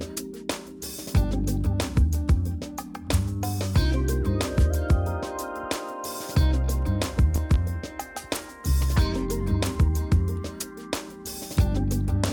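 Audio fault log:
7.36–7.58 s, loud pop: two pops about 10 dB over the sound, which carries on underneath; likely a plug, switch, static or driver glitch.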